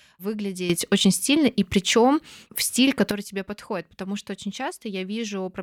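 A sudden gain jump runs from 0.70 s to 3.11 s in this speech clip. The level steps up by about 11 dB from one sample to the next, lifting speech and background noise together, then falls back just before "тебе подходит потому что". The likely cause is a digital gain change applied instantly rather than ramped.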